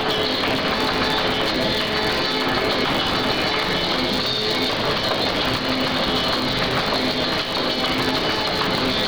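A steady buzz at about 138 Hz runs through the whole clip, and the audio plays about 1.6 times too fast without any matching rise in pitch. Together these point to a block size mismatch (truncated). One stage writes longer blocks than the next stage takes in, so the tail of every block is dropped. The buzz comes from the cut at each block boundary. It fits blocks of 512 samples being written and only part of each being read.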